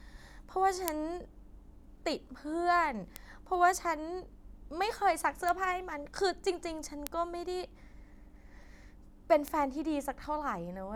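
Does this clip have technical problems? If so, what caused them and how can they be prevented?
Yes. Five isolated, sharp ticks cut through the speech at 0.88, 3.16, 5.49, 7.07 and 9.48 s. Each is instantaneous and broadband, with no link to what is being said. The ones at 0.88 and 7.07 s peak near about -8 dBFS, and the others near about -14 dBFS. These are bit error spikes: a single flipped bit in memory or on a digital link makes one sample, or at most a few in a row, jump by a power of two and then return. The first tick is slightly fuller, which fits a short run of corrupted samples rather than just one. Using error-checked links and memory, along with checksummed transfers and storage, would prevent these flipped bits from reaching the audio.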